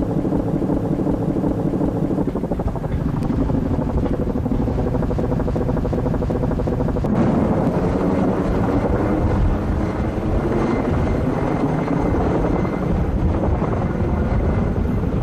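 System hang loop at 0.37–2.23 s and again at 5.20–7.06 s: the system froze while the sound hardware kept replaying one 0.37 s stretch of its ring buffer, which fits a 16384-sample buffer. That stretch repeats five times at about 2.7 Hz, and each time around two seconds of audio is lost.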